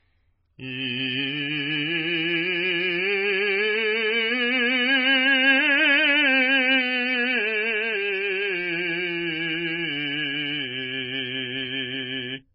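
An encoder starved of bits, likely a heavily compressed MP3 at around 16 kbps, has thrown away everything above about 5.4 kHz and zeroed weak frequency lines throughout the music, leaving it dull and watery, with swirling, metallic chirps and smeared attacks.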